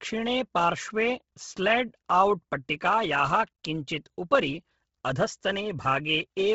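Speech with heavy codec damage throughout: a breathy, grainy edge and nothing above 7.7 kHz, likely Bluetooth LC3 compression at around 16 kbps.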